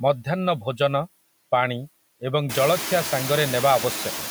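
Noise suppressor artifacts run through the whole speech clip. The suppressor cuts steady background noise by about 19 dB, frame by frame. The noise sinks in the gaps and returns under the speech. This pumping is clearest after room noise jumps at around 2.5 s.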